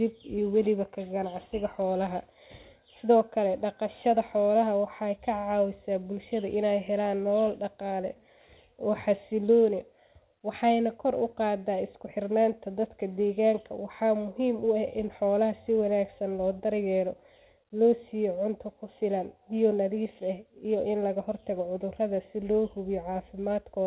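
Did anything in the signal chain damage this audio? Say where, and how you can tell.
No, nothing in the signal chain damaged this speech.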